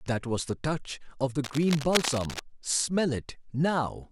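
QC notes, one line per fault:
1.44 to 2.40 s, cable scratch noise: for nearly a second, a dense, uneven scratchy rustle sits over the speech, only a little quieter than the speech itself, so it's hard to miss. The likely cause is a worn cable or connector being moved, with the contact resistance jumping around so fast that the signal picks up a spray of ragged noise bursts until the movement stops.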